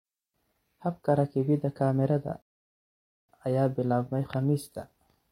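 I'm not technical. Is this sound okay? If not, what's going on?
No. At 2.42 s the speech stops dead for 0.87 s, a rebuffering stall. The player ran out of audio and waited. It picks up exactly where it left off, at "ayaa bilaabmay", so nothing is lost.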